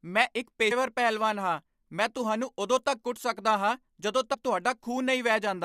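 A speech recording with two short bursts of damaged data in the compressed stream, one at 0.70 s and one from 4.33 to 4.35 s. At each point the decoder meets corrupted bytes, misreads the frame and has to hunt for the next valid header, so a brief chirp, squawk, click or short hole replaces the speech.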